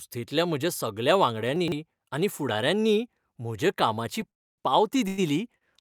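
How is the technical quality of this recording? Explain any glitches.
The recording has four audible glitches in this speech clip: one reordering of audio, one freeze and two brief stalls.

From 1.56 to 1.72 s, after "म्हज्या सगल्या", there are chunks out of order. A 40 ms chunk plays three chunks later than it should. Nothing is lost, but the sequence jumbles briefly at the hard joins. Unlike a stall, no sound is held or stretched.

From 4.30 to 4.60 s, after "आनी फुडाऱ्यांनीय म्हज्या कामाची", the call audio freezes. The sound stops for about 0.3 s of near-silence, then resumes exactly where it left off. This is likely packets held up in transit until the jitter buffer ran dry. It differs from the stalls in its length and in going quiet rather than sustaining the last sound.

At 5.08 to 5.20 s, after "फुडाऱ्यांनीय म्हज्या कामाची पावती", and again at 5.58 to 5.63 s, there is a short stall from a late packet. 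The last sound is stretched for 99 ms and then 34 ms while the packet arrives, causing a held moment rather than silence or scrambling.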